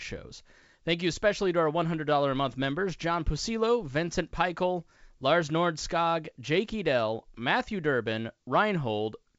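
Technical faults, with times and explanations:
The speech carries the wideband telephone sound of G.722 coding, which fits its 64 kbit/s mode, with energy reaching to about 7.7 kHz and any trace of the coding faint at most.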